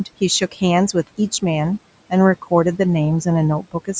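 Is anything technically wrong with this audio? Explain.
Yes. From 0.51 to 0.62 s there is speech cut by the noise suppressor. It misread a quiet stretch as background and pulled it down by about 12 dB, leaving roughly a tenth of a second sounding swallowed and faint.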